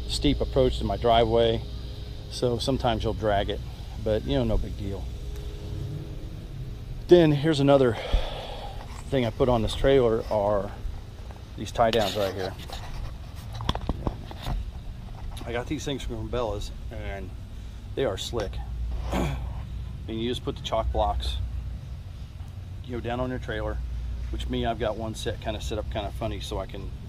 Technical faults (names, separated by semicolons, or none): none